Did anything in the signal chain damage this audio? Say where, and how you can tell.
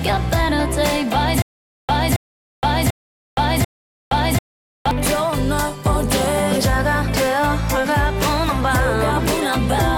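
Yes. A stutter with silent gaps runs from 1.42 to 4.91 s: a 273 ms burst repeats four times, each followed by about 468 ms of digital silence, every 742 ms. This is likely a stalled playback buffer replaying its last fragment, and the audio in between is lost.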